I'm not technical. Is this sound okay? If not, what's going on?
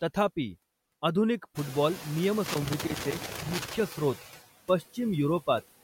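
No. Two problems can be heard in this speech clip.

The first is noise suppressor artifacts, present from start to finish. A noise-reduction stage is turning down whatever it judges to be steady background hiss, so the noise sinks in the gaps between words and swells back up under the speech. The room's background noise gets noticeably louder from around 1.5 seconds, so the pumping is easier to hear after that point.

The second is loose connector crackle, from about 2.46 to 3.80 seconds. This sounds like a worn or dirty plug or socket that is briefly moving. Each time the contact breaks and remakes, the signal gets chopped, producing an uneven burst of scratching and crackling for a little over a second. Reseating or cleaning the cable and its connectors is the usual remedy.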